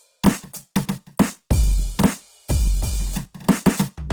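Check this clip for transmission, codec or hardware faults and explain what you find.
The music carries one fault throughout: Opus compression, most likely. Tones sound rough, grainy and noisy rather than swirly, because the encoder keeps every band's energy but refills starved bands with folded or noise content. MP3 leaves spectral holes instead. Bandwidth still reaches 20.2 kHz, and this plainly audible damage fits a low bitrate, around 16 kbps.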